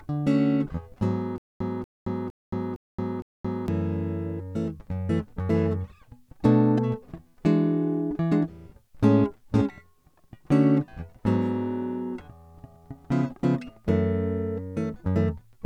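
From 1.38 s to 3.68 s the music breaks into a stutter with silent gaps: a 237 ms fragment repeats five times, each followed by 223 ms of digital silence, a 460 ms cycle. This likely comes from a stalled stream replaying its last buffer, with the intervening audio lost.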